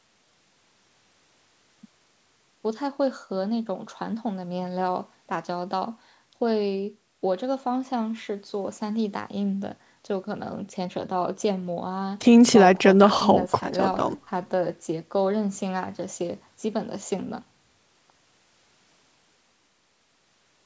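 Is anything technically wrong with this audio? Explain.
No, nothing stood out as wrong on listening to this speech clip, which carries the expected high-pass filtering and upper limit of call microphone processing.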